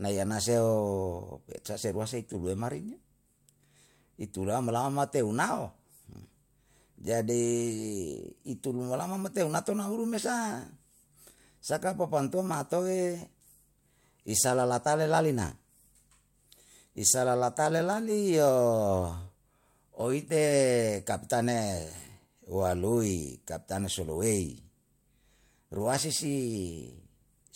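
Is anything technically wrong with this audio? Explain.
No, nothing technically wrong can be heard here.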